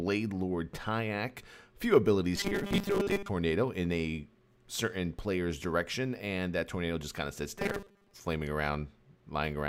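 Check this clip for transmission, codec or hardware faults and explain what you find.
Two stretches show robotic sound from repeated short buffers: 2.36 to 3.29 s and 7.59 to 8.14 s. In both, the audio becomes a rigid, metallic buzz at 200 Hz that still loosely traces the underlying sound. The likely cause is audio arriving too seldom, so playback loops a 5 ms fragment in place of most of the missing audio. That loop imposes the fixed 200 Hz buzz.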